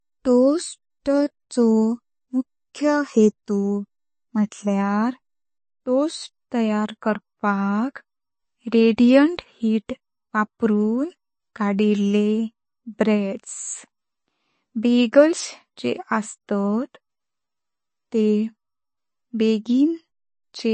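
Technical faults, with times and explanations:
Throughout: MP3 compression. The encoder likely ran short of bits, which fits a low bitrate near 28 kbps, so it discarded everything above 8.3 kHz and dropped quieter frequency components in some frames but not others. The damage is plainly audible: the speech sounds dull and band-limited, and the sibilants have a watery, swirling texture as detail flickers in and out between frames, with a metallic edge and softened consonant attacks.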